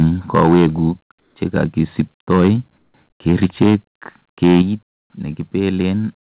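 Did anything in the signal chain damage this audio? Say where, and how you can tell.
Yes. At the converter, the microphone input was likely set too high, so peaks hit the limit of the converter and are squared off. This microphone overload occurs at 0.01–0.04, 0.34–0.67, 1.56–1.64, 1.99–2.01, 2.31–2.5 and 3.28–3.75 s. The worst stretches exceed the limit by about 8, 6 and 5 dB, giving the loudest syllables a harsh crackle.

In call processing, the sender likely stopped transmitting during pauses, and the receiver filled each gap with comfort noise in place of the background. At 1.2–1.36 s and 2.78–2.94 s, the real room tone gives way to 160 ms of smooth, featureless hiss that is about 7 dB and about 5 dB quieter.

Also in call processing, automatic gain control likely cut the device's input level in single steps. The microphone volume was stepped down at 4.62 s by about 7 dB and at 6.09 s by about 3 dB. 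Speech and background drop together at once, with no fade, which points to an input-volume change rather than anything in the room.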